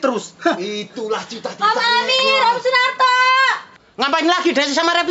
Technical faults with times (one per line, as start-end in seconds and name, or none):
none